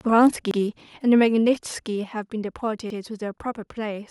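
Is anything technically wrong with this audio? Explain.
Yes. There are two kinds of fault.

Between 0.21 and 0.26 s the loudest part of the speech turns harsh and crackly, with its peaks flattened. This is microphone overload. The input level was likely set too high, so the converter ran out of headroom by about 1 dB and sliced the tops off the waveform. Only a small share of samples are affected, but the squared-off peaks add a brittle edge to that brief syllable.

At 1.02 s and again at 2.04 s, the speech and the background both drop abruptly by about 4 dB, with no fade. This is the microphone volume being stepped down. The likely cause is the call software's automatic gain control, which reacted to the earlier hot input by cutting the device's input volume in discrete steps. Each cut makes the level fall in one clear jump.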